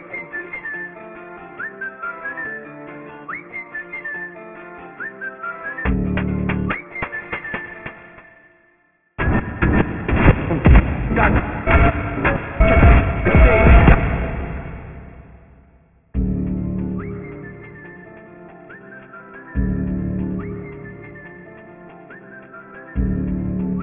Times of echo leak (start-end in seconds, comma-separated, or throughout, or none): none